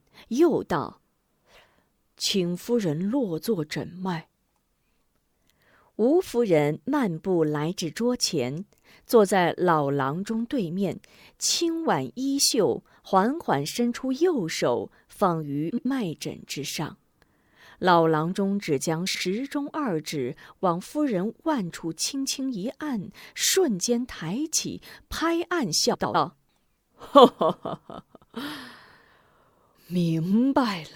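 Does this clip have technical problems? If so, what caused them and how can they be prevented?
Yes. Frames out of order occur in this speech at 15.70 to 15.86 s, 19.06 to 19.23 s and 25.94 to 26.15 s. Each time, two adjacent blocks of about 78 ms (about 105 ms in the last case) were decoded in swapped order, so a short stretch plays with its halves exchanged. That gives a garbled flutter, and no time is lost. Reordering packets by sequence number in a jitter buffer before decoding prevents this.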